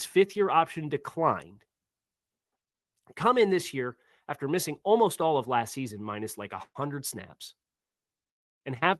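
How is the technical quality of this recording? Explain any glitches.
No glitches are audible anywhere in this speech.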